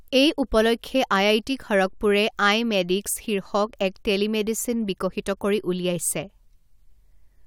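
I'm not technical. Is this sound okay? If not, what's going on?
Yes, this sounds fine.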